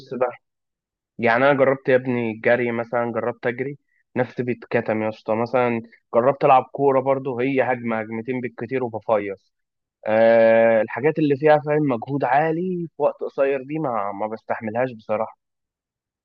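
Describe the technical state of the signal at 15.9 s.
At 15.9 s the speech signal is intact, with no dropout, clipping, glitch or other fault to be heard.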